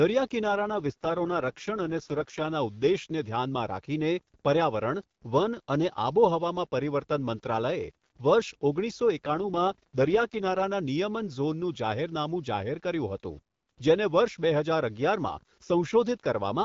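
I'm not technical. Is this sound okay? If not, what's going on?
No. Twice, from 0.44 to 2.48 s and from 9.24 to 10.64 s, the voice turns rough and robotic, then clears. This is an AMR rate drop: on a weak mobile signal, the HD Voice phone codec briefly used fewer bits for the voice and more for error protection.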